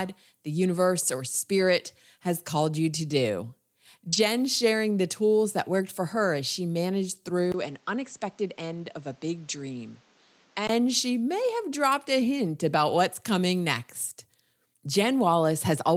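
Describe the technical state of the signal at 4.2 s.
Short concealed packet loss runs from 4.09 to 4.14 s. About 40 ms never arrived, and the receiver filled it by extending the preceding sound. It comes across as a brief smear.

Right after, from 4.12 to 4.18 s, a lost packet rebuilt from error correction follows. About 40 ms plays from low-bitrate backup copies, which fits two lost packets. It sounds rougher and noisier.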